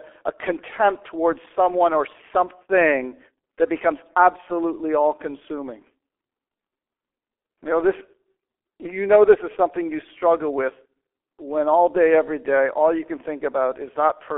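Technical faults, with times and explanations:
Throughout, G.723.1 codec: speech limited to 300 Hz–3.4 kHz turns hoarse with smeared consonants from coarse low-rate modelling fitting about 6 kbit/s, unlike clean band-limiting.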